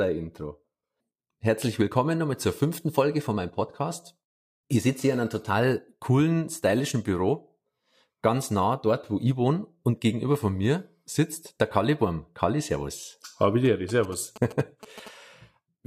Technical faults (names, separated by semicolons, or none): GSM signalling bursts